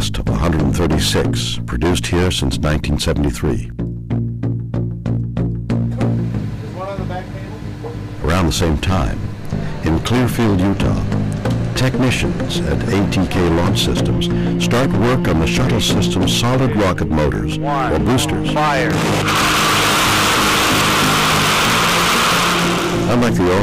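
Hard clipping runs through the entire clip. The signal drives about 22 dB past what the stage can pass, so roughly 30 percent of all samples are cut flat at the ceiling. Those squared-off peaks add dense upper harmonics, heard as a constant harsh fuzz on every loud sound.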